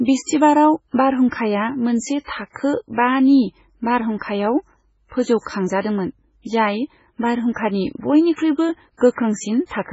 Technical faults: MP3 compression

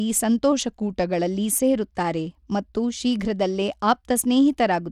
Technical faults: Bluetooth SBC compression; drift correction step

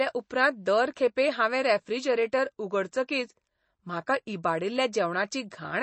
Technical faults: MP3 compression

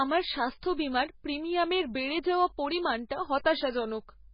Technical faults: MP3 compression

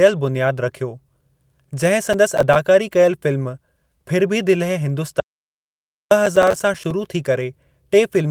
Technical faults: lost packet rebuilt from error correction; processor overload crackle; audio dropout to silence

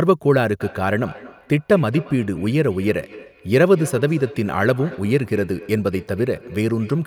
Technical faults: feedback echo between two devices

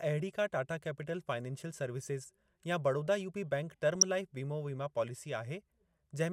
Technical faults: DAB burbling

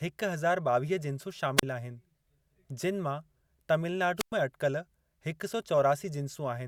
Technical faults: wireless microphone squelch dropout

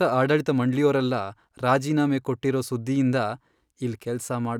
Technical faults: none

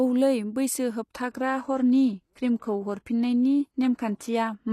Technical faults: adaptive stream at a lower bitrate

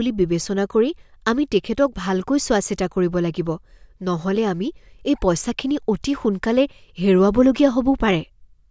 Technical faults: none

